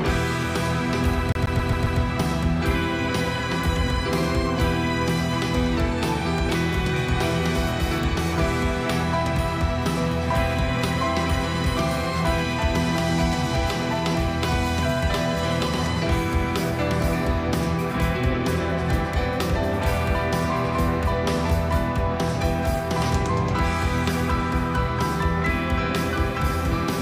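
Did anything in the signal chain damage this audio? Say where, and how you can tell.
Yes, at the playback stage: a CD stuck on one turn. From 1.32 to 2.00 s, the same 0.13 s fragment plays five times in a row. Each jump brings a brief mute. A scratch keeps knocking the laser back one track, giving that fast, even stutter.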